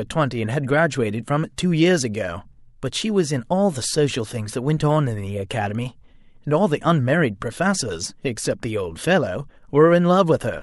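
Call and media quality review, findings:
Pre-echo at 1.56 s and 5.49 s: hiss 17 ms and 13 ms before speech onsets, about 15 dB up, attacks smeared. Transform codec, fits 26 ms blocks with no short-block switching.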